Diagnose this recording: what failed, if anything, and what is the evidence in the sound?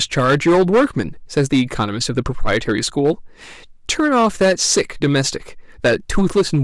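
Hard clipping throughout the speech: the signal was driven about 12 dB beyond what a stage could pass, most likely a converter input or a sample-format conversion with no headroom, so every peak was sheared flat at the ceiling. Roughly one sample in twenty sits pinned there. The flattened tops generate harmonics high in the spectrum, heard as a harsh, gritty fuzz riding on every loud syllable for the whole clip rather than occasional crackles.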